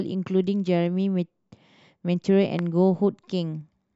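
A sudden voltage step, likely from a plug, switch, static discharge or driver glitch, was added to the signal path between 2.59 and 2.61 s, producing a single loud pop. The downstream circuitry shaped this brief impulse into a sharp, percussive crack standing roughly 10 dB above the speech level, lasting only about 20 ms. The speech carries on underneath without interruption, so the pop sits on top of the sound rather than replacing it.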